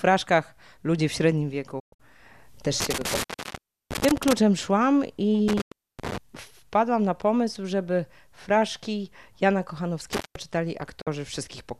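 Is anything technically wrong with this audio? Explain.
Yes. The audio has two kinds of fault: digital broadcast dropouts and an intermittent contact.

Digital broadcast dropouts occur at 1.79 to 2.00 s, 5.61 to 5.72 s and 11.01 to 11.07 s. The receiver lost valid frames and muted until good ones returned. Each mute fades in about 8 ms. The first is broken into several short holes totalling 168 ms over about 190 ms, and its longest gap is 120 ms. The others last 96 ms and 48 ms. The sizes fit lost 24 ms frames.

An intermittent contact opens at 2.80 to 4.33 s, 5.48 to 6.18 s and 10.13 to 10.36 s. A loose plug or cable breaks the signal path for a moment. The sound cuts out, with crackle at each edge and faint hiss during the gap. The open spans are about 680 ms, 320 ms and 190 ms. The second dropout falls inside the second contact break.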